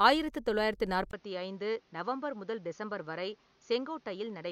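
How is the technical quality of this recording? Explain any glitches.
The recording degrades partway through. After "ஆயிரத்து தொள்ளாயிரத்து", at 1.11 s, there is a 20 ms gap. From there to the end, nothing passes above 6.8 kHz, the level drops about 5 dB, and a new noise floor appears. This is likely an input switched to a poorer device.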